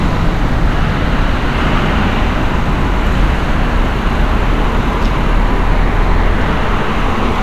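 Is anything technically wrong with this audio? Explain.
No, nothing technically wrong is audible in this audio.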